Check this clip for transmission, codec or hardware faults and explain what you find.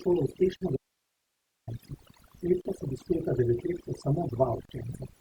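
Three faults are present in this speech: heavy-handed noise reduction across the whole clip, short silent gaps at encoded-segment joins, and one longer dropout that leaves only hiss.

The overdone noise removal runs throughout. The processor pulled individual frequency bands down hard wherever they resembled its noise estimate, taking quiet speech detail along with them. The background drops to near silence with twinkling specks. A spectrogram shows scattered isolated time-frequency dots against blank background.

Gaps at a join of encoded pieces occur at 0.57–0.61 s (about 46 ms), 2.61–2.65 s (40 ms) and 4.65–4.69 s (40 ms), repeating every 2.0 s. Each separately encoded piece kept its start delay and end padding, so the sound stops briefly and then resumes where it left off. The waveform shows flat notches with slightly smeared edges, and the spectrogram shows thin vertical blank stripes.

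The audio dropout to a faint residue runs from 0.77 to 1.67 s, about 0.91 s. The speech cuts out abruptly, with no fade, leaving only hiss roughly 50 dB below the signal, and then returns mid-flow. The likely cause is the signal being lost while the downstream path stayed live. The waveform collapses to a thin band of noise, and the spectrogram fades to faint broadband grey.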